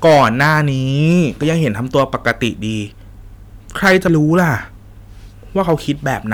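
Hard clipping hits the speech four times: 0.05 to 0.60 s, overdriven by about 10 dB; 1.07 to 2.47 s, by about 7 dB; 3.84 to 4.44 s, by about 11 dB; and briefly at 5.61 to 5.73 s, by about 2 dB. The level exceeds what a stage can pass, so peaks are sliced flat, giving harsh fuzz on the loud stretches and mild crackle in the last. The waveform shows squared-off tops, and a spectrogram shows broadband harmonic smearing reaching far up the spectrum.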